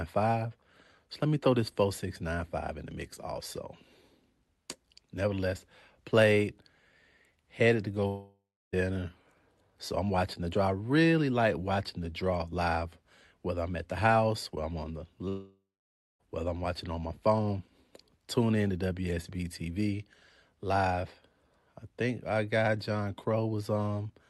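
At 8.07 s, after "headed to", and 15.28 s, after "whether I'm on the", a long network dropout, likely lost packets, drops about 0.66 s and 0.92 s of speech. A fading buzz decays into silence before "whether I'm watching on". Spectrograms show smeared bands thinning to blank columns.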